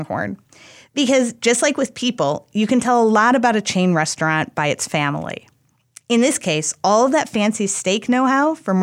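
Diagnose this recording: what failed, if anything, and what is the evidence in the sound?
Nothing failed; no fault can be heard anywhere.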